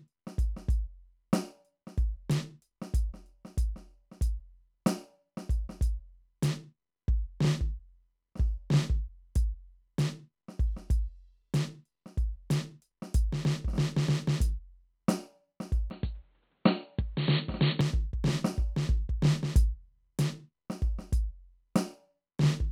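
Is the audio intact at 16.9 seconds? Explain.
No. From 15.90 to 17.81 s the music turns dull and boxy, likely an input switched to a poorer device. On a spectrogram, everything above 4.4 kHz vanishes and a faint new noise floor appears, while the waveform's level barely changes.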